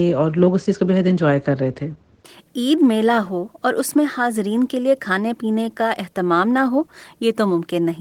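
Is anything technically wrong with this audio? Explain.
No, nothing stood out as technically wrong on listening to this speech recording.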